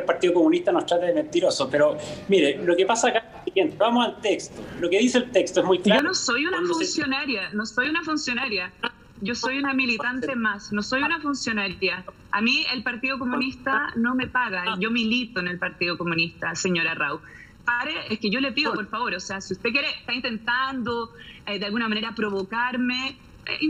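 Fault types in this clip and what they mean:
Channel delay (comb filtering): from 5.99 s to the end, one channel trails the other by under a millisecond, and summing them to mono cancels evenly spaced frequencies. Notches start near 700 Hz and recur every 1.4 kHz or so, giving a hollow, phasey colour.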